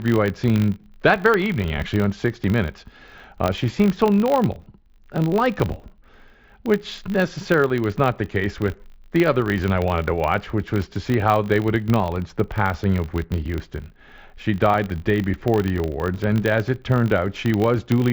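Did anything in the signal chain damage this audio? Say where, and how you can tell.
Yes. The damage is in block-based processing, a filter restarted on every block: a 50 Hz buzz runs throughout, fitting a 20 ms block, as each block starts from silence with a small tick. Unlike mains hum, it rises and falls with the speech level, riding over the mSBC headset path's 8 kHz band limit.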